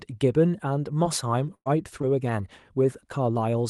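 At 1.03 to 1.07 s there is a short concealed packet loss. About 20 ms went missing. The receiver extended the preceding sound, leaving a brief smear. The last 20 ms, from 1.05 s, is a lost packet rebuilt from error correction. A low-bitrate copy from the next packet filled it, so it sounds rougher and noisier.

From 1.55 to 1.68 s comes a burst of packet loss. About 120 ms never arrived. The last sound is stretched into a buzz or hiss that fades, with about 60 ms of silence. Speech resumes further on, the middle gone. Its final 20 ms, from 1.66 s, is again rebuilt from error correction and sounds grainy.

At 2.02 to 2.05 s the same pattern repeats: a short concealed loss of about 20 ms, heard as a small smear. Its last 20 ms, from 2.03 s, is rebuilt from error correction and sounds coarser. All of this rides on an Opus call path whose top end stops near 12 kHz.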